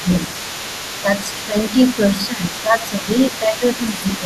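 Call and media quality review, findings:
Other side's voice leaking through: second voice audible for the whole clip, about 15 dB below the near-end speech. Likely a residual echo from the far-end loudspeaker output that the echo canceller failed to subtract from the microphone path.

Speech suppressed in double talk: near-end level dips while the leaked voice is present. Deepest drops are about 10 dB at 0.02–0.32 s, 1.46–1.56 s, 2.15–3.64 s (roughly a second affected within that span) and 3.86 s to end. Shallower dips of about 5 dB occur at 1.03–1.08 s and 1.24–1.30 s. Likely cause: the echo canceller misreading overlapping talk as echo and attenuating both.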